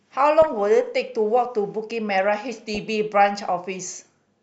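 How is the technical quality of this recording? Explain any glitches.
The speech in this recording is marred by two short bursts of digital reception damage.

DAB burbling appears from 0.42 to 0.53 s and again from 2.68 to 2.77 s. A weak broadcast signal let a small share of bit errors slip through the error correction into the MP2 audio stream. Corrupted samples then put short blips of noise into single sub-bands over what sounds like a handful of frames in each burst. The result is a brief burbling laid over the speech.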